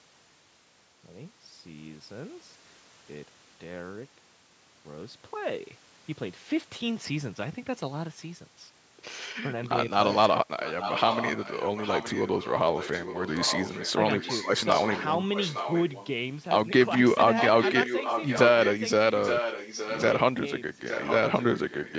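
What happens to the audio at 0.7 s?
Nothing goes wrong at 0.7 s: the speech there is intact, carried cleanly through the call's microphone processing, which keeps content below 8 kHz and trims the deepest bass as it normally does.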